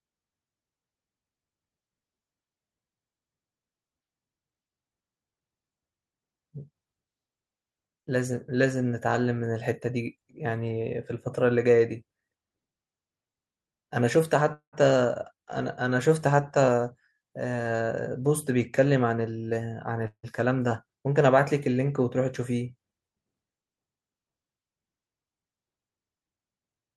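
At 14.53 s the speech stalls: the last sound hangs on as a fading buzz, drops to about 0.1 s of silence, and resumes at 14.75 s exactly where it left off, with nothing skipped. This call audio freeze likely came from delayed packets draining the jitter buffer, so the receiver padded roughly 0.19 s and the playback delay grew by that much.

From 16.58 s to 19.11 s the speech sounds hurried, running about 8% fast while its pitch stays put. This is a jitter buffer speed-up: to work off the extra delay, the receiver cut tiny pitch-period slices out repeatedly, removing around 0.2 s in total.

A second call audio freeze at 20.07 s sounds the same, a brief fading buzz and about 70 ms of silence before the speech continues at 20.25 s with nothing lost. It was likely another jitter buffer underrun from held-up packets, with about 0.16 s of filler inserted.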